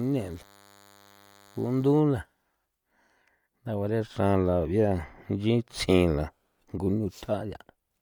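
A thin, steady buzz with a dense stack of harmonics sits under the speech from 0.0 to 2.0 s, well below the voice. This is DECT cordless phone buzz: a nearby handset or base station transmits a radio burst every 10 ms, and the audio circuitry rectifies those bursts into a 100 Hz tone.

Across the whole clip, the voice has a plainly audible grainy, breathy edge, with its upper detail smeared into noise-like texture. The likely cause is Bluetooth LC3 compression, a transform codec working in 10 ms frames at a rate that fits about 48 kbps, which replaces parts of the upper spectrum with filled noise. Nothing is present above 20.1 kHz.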